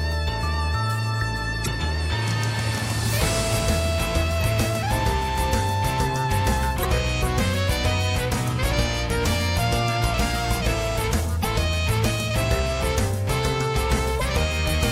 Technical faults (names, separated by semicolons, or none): damaged data in a compressed stream